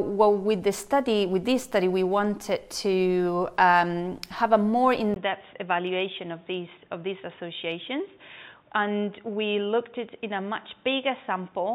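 At 5.14 s a gap of about 20 ms precedes sound that stays dull and boxy to the end, with nothing above 3.7 kHz, a lower level and faint new background noise. This is likely the input switched to a poorer device, not mere filtering.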